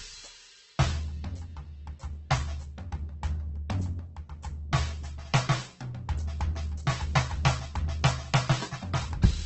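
Across the whole piece the music sounds rough and grainy, with tones dissolving into noise and nothing above about 8.2 kHz. This is likely Opus compression in its CELT mode at a rate near 12 kbps, filling starved bands with folded or noise content.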